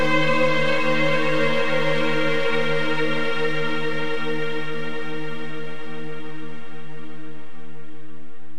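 DC offset runs through the whole clip: the entire waveform sits shifted away from zero by a constant amount, at about -20 dBFS. You can't hear the shift itself, but it uses up headroom on one side and adds steady energy at 0 Hz, below the audible range.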